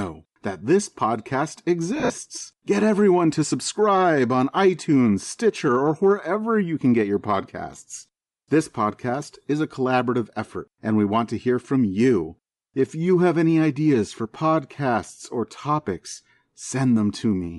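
Throughout, the speech has a breathy, grainy top end where upper frequencies are replaced by noise fill, likely Bluetooth LC3 compression at a rate consistent with 48 kbps.

From 1.96 to 2.10 s, just after "that this podcast", lost LE Audio frames, totalling 100 ms with runs up to about 50 ms, become noisy smears as the decoder repeats the last spectrum with scrambled phase.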